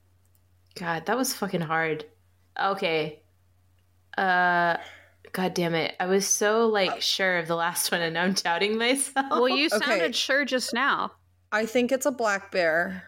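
No technical faults are audible.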